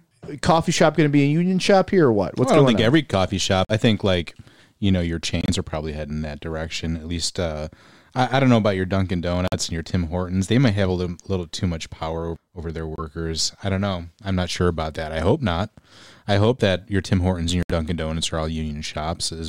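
Corrupt frames were muted: the decoder rejected damaged compressed frames and silence replaced them, leaving abrupt 56 to 88 ms holes in the speech at 3.65, 5.41, 9.48, 12.96 and 17.63 s.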